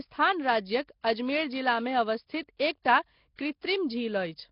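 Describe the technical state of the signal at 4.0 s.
At 4.0 s the speech carries the same damage heard across the whole clip, which is likely Nellymoser compression. The sound is rough and hissy, with a smeared, underwater quality. Nothing is present above 5.3 kHz. The codec codes short blocks at a fixed, very low bit depth. Weaker bands get no bits and are refilled with noise, which makes the halo. The heavy damage fits a bitrate near 22 kbps.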